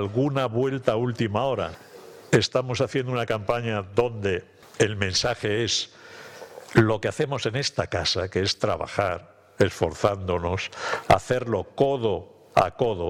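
From 1.38 to 1.96 s, and again from 6.62 to 7.77 s, the sound runs about 5.7% fast and its pitch rises by roughly 96 cents, nearly a semitone, before snapping back to normal. Speed and pitch shift together, and the change starts and ends abruptly. This is a drift correction step, likely from clock-matching software abruptly raising its playback rate to drain or refill its buffer, then returning to nominal rate.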